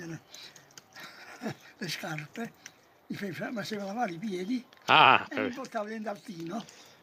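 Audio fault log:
Nothing in this audio registers as a fault. The log has no timed entries to record.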